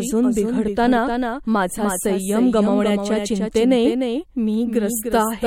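A doubled audio track runs through the whole speech clip: a second, full-band copy of the same sound trails the original by roughly 300 ms, only a few decibels quieter. It carries no reverberant tail or room colouring, so it reads as a crisp, out-of-step repeat rather than an echo, smearing every syllable into its own ghost. The cause is likely the signal being captured twice, once through a slower path, with both copies mixed together.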